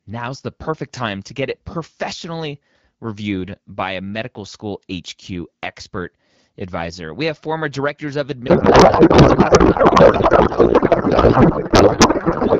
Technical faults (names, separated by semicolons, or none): codec payload misread